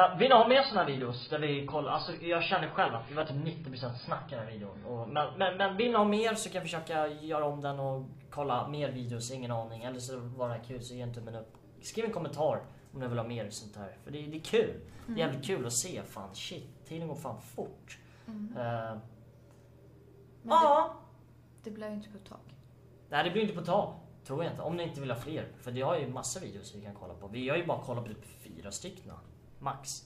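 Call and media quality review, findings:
Adaptive stream starting at a low bitrate, 0.0 to 6.0 s. Nothing above 5 kHz, heavier codec artefacts, then abrupt better quality with no gap. Player-side ABR start; sound fits roughly 16 kbit/s AAC stepping to about 96 kbit/s. Unlike a mid-stream downshift, it occurs only at start, once, and only upward.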